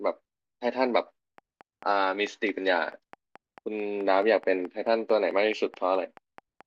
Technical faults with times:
1.38-6.62 train of clicks

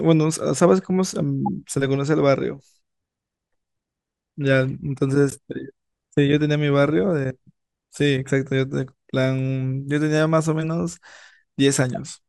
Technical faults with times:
1.46-1.48 corrupt frame decoded
5.30-5.33 corrupt frame decoded

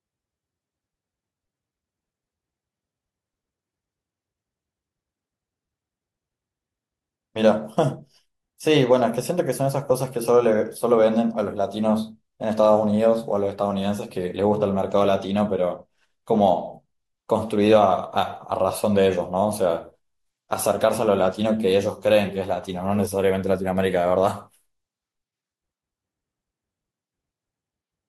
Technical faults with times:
none

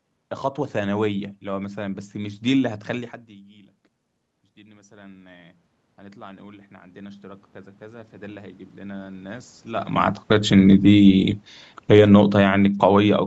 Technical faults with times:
4.55-9.57 automatic gain rising
10.16-13.26 automatic gain falling

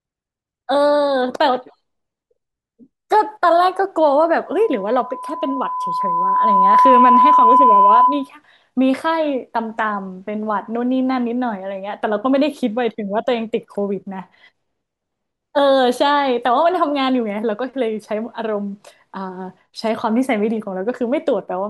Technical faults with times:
4.51-8.29 loudspeaker feedback squeal

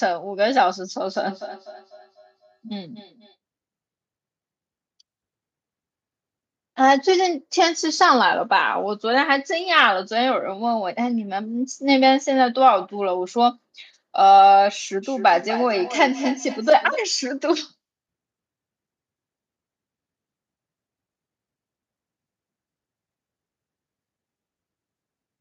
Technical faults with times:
1.06-3.36 feedback echo between two devices
15.03-17.05 feedback echo between two devices

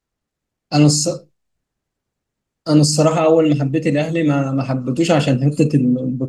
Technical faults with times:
none

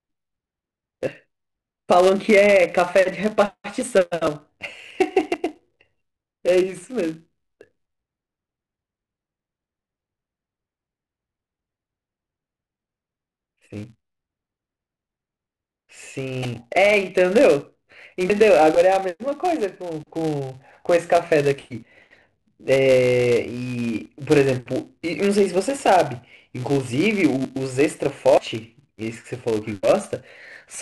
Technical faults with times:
0.00-30.82 filter restarted on every block
1.07 dropped buffer (overrun)
4.27 dropped buffer (overrun)
5.34 dropped buffer (overrun)
16.43-16.45 corrupt frame decoded
18.30 dropped buffer (overrun)
21.83 dropped buffer (overrun)
24.06 dropped buffer (overrun)
27.45 dropped buffer (overrun)
28.37 dropped buffer (overrun)

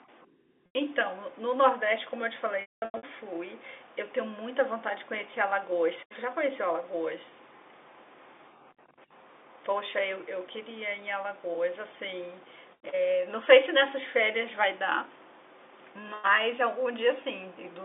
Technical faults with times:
0.66-0.75 packet loss with pitch repetition
2.61-3.03 packet loss with pitch repetition

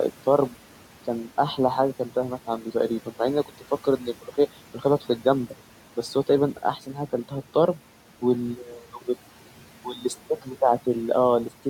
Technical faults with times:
0.00-11.70 overdone noise removal
2.47-2.75 speech cut by the noise suppressor
3.84-4.35 speech cut by the noise suppressor

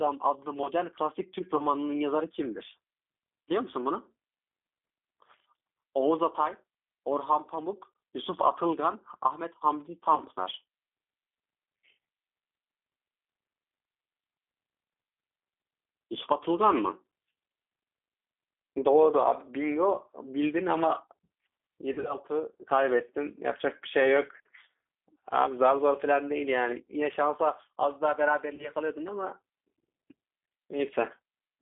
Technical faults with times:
0.00-31.61 G.729 codec
1.57-1.62 VoIP packet loss concealed by the speech codec
10.16-10.21 VoIP packet loss concealed by the speech codec
21.93-22.15 VoIP packet loss concealed by the speech codec
28.55-28.69 VoIP packet loss concealed by the speech codec

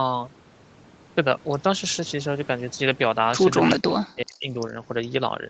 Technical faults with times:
3.86-4.58 speech suppressed in double talk

